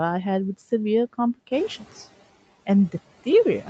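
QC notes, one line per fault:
1.51–1.69 s noise suppressor catching up: room noise jumps near 1.5 s, leaks through, then sinks about 9 dB over 180 ms as its estimate adapts, smoothly rather than a gate's abrupt cut.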